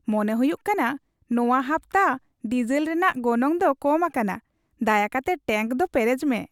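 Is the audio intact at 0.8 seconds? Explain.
Yes, at 0.8 seconds the speech plays through cleanly, with no dropout, click, distortion or other fault to be heard at that point.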